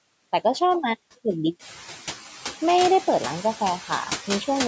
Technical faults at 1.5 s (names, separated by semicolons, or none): noise suppressor artifacts